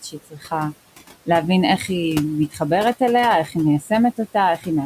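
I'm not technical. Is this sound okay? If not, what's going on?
No. Noise suppressor artifacts run through the whole clip. A filter keeps turning down the room's background noise, so that noise sinks in the pauses and creeps back under the talking.

Speech cut by the noise suppressor happens at 0.02 to 0.52 s, 2.51 to 2.61 s, 3.46 to 3.56 s, 3.81 to 3.91 s and 4.58 to 4.67 s. The filter mistook bits of speech for background noise and lowered them, so these brief moments sound swallowed or faint.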